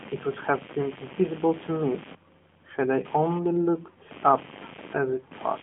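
Computer activity noise throughout: a chirp pulsing about a hundred times a second, roughly 15 dB under the speech, as load changes shake the ground.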